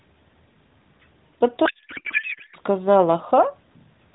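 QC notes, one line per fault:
1.66 to 2.56 s, codec payload misread: the speech gives way to garbled noise and warble that barely tracks it. The decoder is reading fields from the wrong bit positions, which fits octet-aligned AMR read as bandwidth-efficient. The light AMR-NB band-limiting continues around it.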